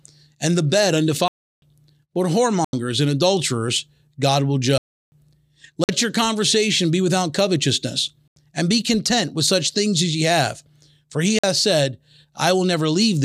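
Speech clip with six blocks of digital silence, each a hard cut to silence and back. There are two 341 ms holes at 1.28 to 1.62 s and 4.78 to 5.12 s, consistent with 16384-sample blocks. Shorter gaps fall at 2.65 s (85 ms, before "and adulterers"), 5.84 s (49 ms, before "your conversation be without"), 8.28 s (85 ms, between "conversation be without covetousness" and "and be content with") and 11.39 s (47 ms). The 85 ms gaps fit 4096-sample blocks. The power-of-two sizes point to the output buffer not being filled in time.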